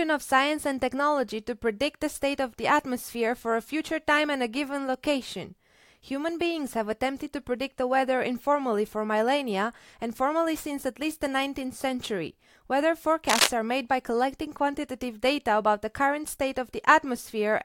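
A speech recording with one burst of cable scratch noise from 13.29 to 13.47 s. For under a fifth of a second, a dense, ragged rustle sits somewhat louder than the voice. Its likely cause is a worn cable or connector being moved, so that its contact resistance jumps about rapidly. Unlike a single digital click or a dropout, the sound doesn't vanish or pop once. It is a scratchy cluster of uneven bursts laid over the speech.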